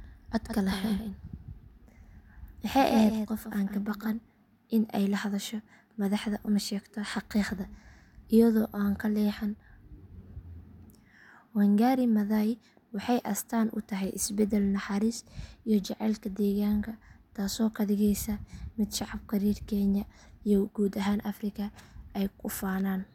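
Speech, with a doubled audio track from the start to 4.1 s: a full-band copy trails by roughly 150 ms, about 10 dB quieter. This is likely from a second, slower capture path. The waveform shows faint repeated onsets, and the spectrogram shows each syllable ghosted and shifted right, stopping abruptly at 4.1 s.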